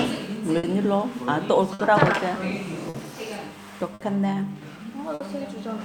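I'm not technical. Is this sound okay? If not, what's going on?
No. The sound hangs for a split second at 0.57, 1.73, 2.89, 3.94 and 5.14 s. These are short stalls from a late packet: data arrived late, so the last bit was stretched, with nothing lost.

On top of that, there is clock drift between sender and receiver. The sending side runs about 5 percent slow, so the receiver keeps running out and having to wait.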